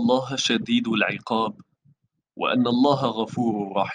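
No technical faults can be heard anywhere in the recording; the speech signal stays continuous and stable throughout.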